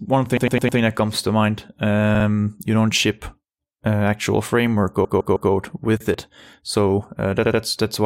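Speech with repeated frames: runs of compressed frames replay as a stutter at 0.37–0.79 s (before "that comes to mind"), 2.15–2.25 s, 5.04–5.51 s and 7.45–7.60 s, with blocks of 52 to 157 ms. On a spectrogram these appear as identical copied slices side by side.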